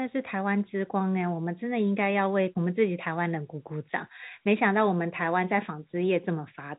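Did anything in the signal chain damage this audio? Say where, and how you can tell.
No, nothing in this speech stood out as damage on listening; the band stops just under 3.8 kHz, which is what G.711 telephone coding at 64 kbps normally produces.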